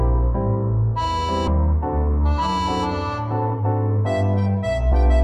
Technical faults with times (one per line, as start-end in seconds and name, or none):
1.47-1.49 skip ahead
1.67-2.32 jitter buffer speed-up
3.48-4.92 jitter buffer speed-up